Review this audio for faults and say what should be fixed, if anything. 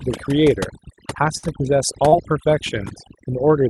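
Overdone noise removal runs through the whole clip. The suppressor is set too aggressively and pulls individual frequency bands down whenever they sit near its noise estimate, taking quiet parts of the speech with them. The background becomes near silence flecked with twinkling specks. Back the reduction strength off, or apply it only where the noise floor actually warrants it.

A burst of packet loss hits from 1.37 to 1.45 s. Several consecutive packets arrive too late or not at all, so the receiver extends the last sound for about 54 ms and fades it down. That comes out as a held buzz or fading hiss, and about 40 ms of speech is simply skipped when playback resumes. Deeper jitter buffering and forward error correction would keep those packets playable.

A short concealed packet loss occurs from 2.09 to 2.14 s. A brief stretch misses the decoder deadline, and the receiver improvises roughly 33 ms from the preceding pitch or shaped noise before blending back in, while about 40 ms of the real audio is lost. 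It sounds like a quick smear or wobble, and a short consonant there can vanish. Redundant packet coding or a slightly larger jitter buffer would prevent these gaps.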